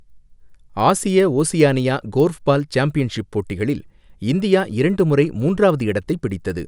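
Throughout the speech, a resampler restarted on every block produces regular ticks at 10 Hz, present only while sound is playing. This fits 100 ms blocks converted independently, likely from 24 kHz to 48 kHz, with each block edge computed without its true neighbouring samples.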